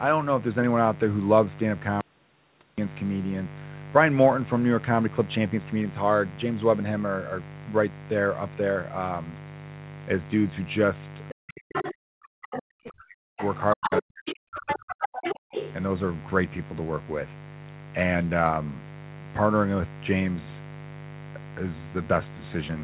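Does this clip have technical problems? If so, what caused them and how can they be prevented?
Yes. Mains buzz runs through the whole clip, a raspy 50 Hz harmonic buzz around 15 dB below the speech, from switching spikes entering through a dimmer, rectifier or unshielded cable. Prevent it with shielded, grounded cabling away from dimmers and power supplies.

An audio dropout to a faint residue occurs from 2.01 to 2.78 s: 770 ms of signal vanishes abruptly, leaving only very faint hiss, likely from a break upstream while the downstream path stayed live. Secure the connections and monitor the input for interruptions.

The other side's voice leaks through at 11.29–11.34, 11.75–11.92, 12.42–12.92 and 13.38–15.72 s, growing from faint to nearly speech level, likely loudspeaker playback the echo canceller missed. Use a headset or better acoustic isolation between loudspeaker and microphone.

Speech is suppressed in double talk from 11.31 to 13.39 s and from 13.73 to 15.55 s, dipping very deeply, likely because the echo canceller attenuated both voices while the far side talked. 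A headset removes the echo, so the canceller no longer needs to suppress.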